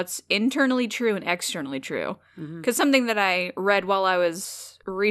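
Speech recording, no technical faults detected.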